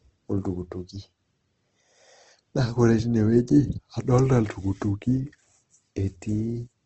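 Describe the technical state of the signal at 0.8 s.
At 0.8 s, as through the whole clip, the speech shows likely Opus compression in its music (CELT) mode, at a rate that fits roughly 16 kbps. With too few bits, bands are filled by folding or noise, so the voice sounds grainy and rough, with the bandwidth narrowed to wideband.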